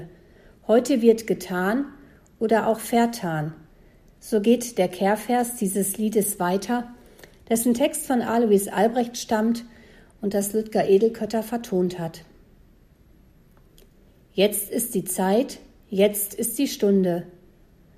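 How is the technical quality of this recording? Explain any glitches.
No glitches or technical faults.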